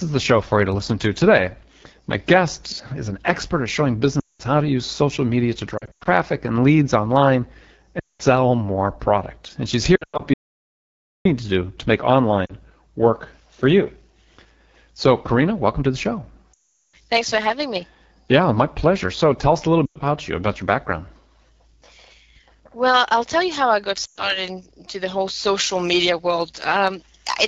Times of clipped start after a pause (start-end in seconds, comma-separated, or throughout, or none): none